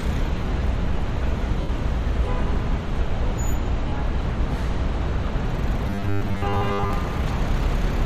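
At 1.61 to 1.69 s, and again at 3.88 to 3.92 s, there are lost LE Audio frames: about 80 ms, then 40 ms, which fits 10 ms frames. The LC3 decoder covers each gap by recycling the last spectrum with scrambled signs, so things go briefly smeary and noisy.

From 5.87 to 6.93 s it turns into a robotic sound, a stiff metallic buzz at 100 Hz that still loosely tracks the audio. That's likely repeated short buffers: one 10 ms chunk replayed over and over, with most of the real audio skipped.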